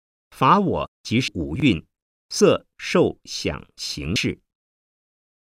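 At 1.27 s the speech jumps ahead by about a fifth of a second. Compressed frames were skipped, either missing or rejected by the decoder as damaged. That points to roughly seven frames gone, which fits a 24 ms frame size. The same thing happens at 2.40 s (about 70 ms lost) and 4.15 s (about 150 ms lost).

Between 1.56 and 1.62 s there's a jumbled moment. A chunk of about 20 ms arrived late and plays two chunks after where it belongs, so the order is wrong even though no audio is lost.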